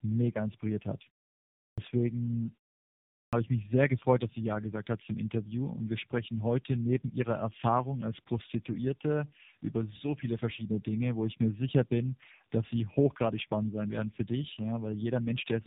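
Speech passes through tandem speech coding, likely three narrowband codecs in a row, ending in an AMR-NB-type coder, each re-encoding the last one's losses, leaving rough, muffled, warbly speech with nothing above 3.7 kHz. After pauses of 0.71 s and 0.78 s, the sleeping output device wakes late, producing a clipped start after a pause at 1.74 s and at 3.29 s before "ich mich sehr gefreut", with about 37 ms of onset swallowed each time.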